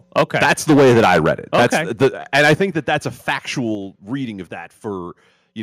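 From 0.16 to 2.08 s the speech shows microphone overload: peaks are driven about 10 dB past the converter's limit, so roughly a tenth of the waveform has its tops sheared flat, giving a harsh, crackling edge to the loudest syllables. The likely cause is an input volume set too high for the converter. At 0.19 s the microphone volume is stepped down by about 2 dB, likely the call software reacting to the clipping. Voice and background drop together in one abrupt step, but not enough to clear the distortion.

A second overload runs from 2.34 to 2.63 s, just before "that that's a". It is about 9 dB over, with roughly a tenth of samples clipped, likely from the same excessive input gain. Inside it, at 2.55 s, the volume steps down by about 8 dB, a sudden drop in overall level, likely an automatic correction triggered by the distorted peaks.

After "that that's a", a brief overload from 3.29 to 3.32 s exceeds the limit by only about 1 dB. 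Around 1 percent of samples are clipped, a short rasp, likely because the lowered gain still leaves little headroom. At 3.75 s, just before "reading of", a further step-down of about 5 dB makes the whole signal abruptly quieter again, likely the software cutting the input volume once more.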